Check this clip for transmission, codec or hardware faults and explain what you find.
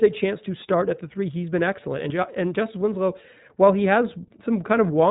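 One codec fault runs through the entire clip. iLBC codec, throughout: this narrowband coder codes each frame's excitation independently, here pointing to 20 ms frames at its 15.2 kbps mode. Nothing above 3.8 kHz survives, and the speech carries a plainly audible rough, synthetic coding texture.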